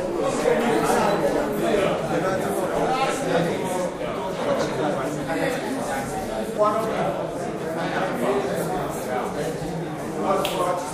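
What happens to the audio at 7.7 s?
Nothing goes wrong at 7.7 s; the sound carries straight through that moment without any dropout, click, glitch or other fault.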